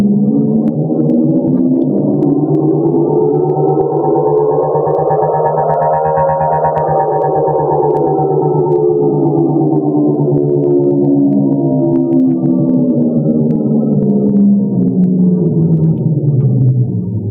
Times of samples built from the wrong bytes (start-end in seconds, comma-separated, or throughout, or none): none